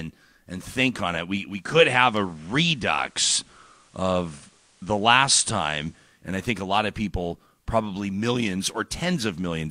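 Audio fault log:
1.46–6.31 s, digital radio blending to analogue: the receiver lost the digital stream and cross-faded over about 444 ms to the FM broadcast of the same station just before "I think a lot", then faded back. Broadband hiss rises to roughly 35 dB below the signal, and the level shifts by about 1 dB. Both clear at the return to digital.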